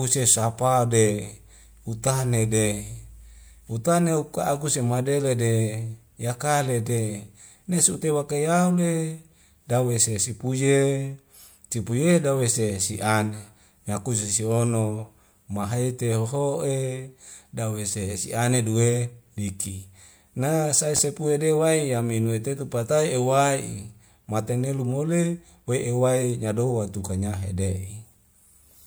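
At 20.97 to 21.00 s, between "duwe liki na sae" and "de waeya minue tetu", a single loud pop stands a few decibels above the speech, likely a voltage pulse from a plug, switch or static discharge. Unlike a dropout, the speech carries on uninterrupted beneath it.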